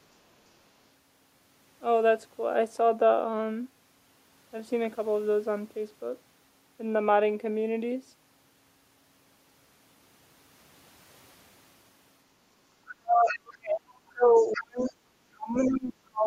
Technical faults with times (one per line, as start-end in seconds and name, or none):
12.97-15.02 speech suppressed in double talk
13.28-13.38 other side's voice leaking through
14.39-14.91 other side's voice leaking through
15.34-16.27 speech suppressed in double talk
15.56-15.78 other side's voice leaking through